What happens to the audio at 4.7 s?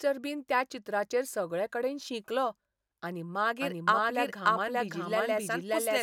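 At 4.7 s the speech is doubled. A doubled audio track begins abruptly at 3.6 s, just after "चित्राचेर सगळेकडेन शिंकलो आनी", and runs to the end of the clip. A second full-band copy trails the original by about half a second, at roughly the same loudness. It has no decay or room colour, so it sounds like a clean, out-of-step repeat. The likely cause is a second capture through a slower path.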